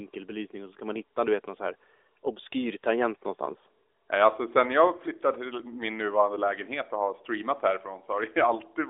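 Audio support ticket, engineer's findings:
Nothing to flag on this one: the speech comes through as an ordinary narrowband mobile call, the AMR-NB codec band-limiting it to phone bandwidth with nothing above about 3.7 kHz, and no faults turn up anywhere in the clip.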